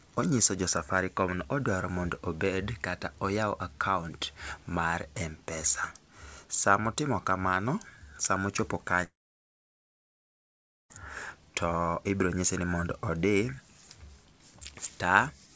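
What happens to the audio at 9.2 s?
At 9.2 s the sound sits inside a long network dropout running from 9.04 s to 10.92 s, about 1.9 s. The receiver stretches the last sound into a brief fading buzz, then about 1.8 s of near silence follows before audio resumes with that stretch simply gone. This is likely a run of lost packets. Unlike a short packet-loss glitch, the concealment gives up quickly and leaves a real hole.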